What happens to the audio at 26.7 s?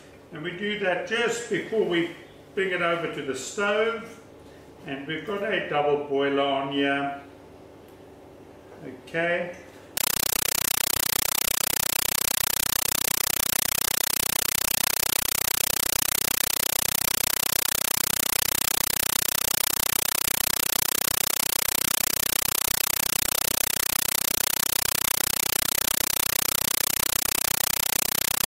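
At 26.7 s the sound is replaced by a compressed stream played as audio, running from 9.97 s to the end. An undecoded AC-3-style bitstream, which fits 384 kbps, is treated as samples. It is heard as loud chattering static. The waveform shows 8 ms bursts and flat silences 31.25 times a second, and the spectrogram shows broadband vertical stripes.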